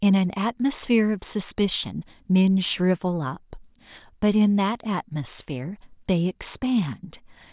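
Speech recording with no audible technical faults.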